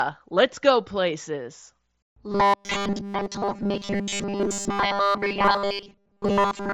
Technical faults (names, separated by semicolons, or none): robotic sound from repeated short buffers